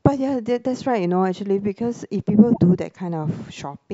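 From 2.50 to 2.59 s the speech is broken by a short glitch lasting about a tenth of a second. This is damaged data in a compressed stream: part of the encoded data at that point was lost, zeroed or overwritten. The decoder cannot make sense of those frames, either playing out garbled content or discarding them, and loses sync until it finds the next valid frame header and resumes clean decoding.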